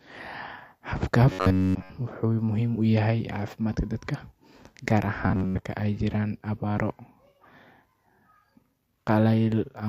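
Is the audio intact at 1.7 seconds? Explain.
No. Robotic sound from repeated short buffers spans 1.32 to 1.90 s. The speech becomes a rigid, metallic 93.8 Hz buzz, likely from an 11 ms buffer looping.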